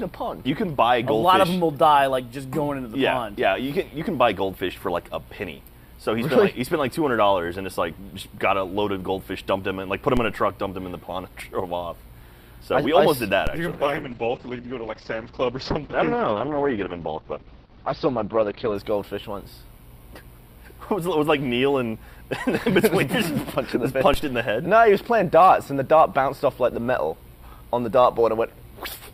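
The audio has three DC steps, at 10.17 s, 13.47 s and 24.14 s. At each one the waveform's zero line jumps and then settles back, dying away about as fast as a 5 Hz high-pass would pull it. That is heard as a brief low thump. Unlike a dropout or a digital click, nothing is missing: the sound carries straight through each thump unchanged.

From 13.73 s to 18.81 s a call bitrate drop takes hold. Audio bandwidth shrinks from 20 kHz to 6 kHz, and for about 5 s the texture turns coarse and watery, which fits an encoder squeezed from around 96 kbps down to roughly 8 kbps. A plain low-pass filter would only muffle the sound. Here the roughness of the coarser coding comes with the dulling, and both lift together once the bitrate recovers.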